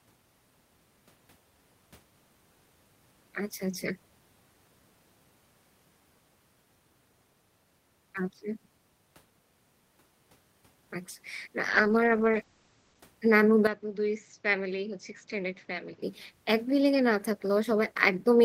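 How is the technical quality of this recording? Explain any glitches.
The recording has two glitches in the second half of the speech.

From 11.71 to 13.07 s the sound turns rough and muffled: a call bitrate drop from 32 to 11 kbps cut the coded bandwidth from 20 kHz to 8 kHz.

From 13.67 to 16.02 s the sound goes dull, about 10 dB quieter, with nothing above 7.6 kHz and a noise floor roughly 30 dB down. The likely cause is the input switching to a poorer device, without any gap at the change.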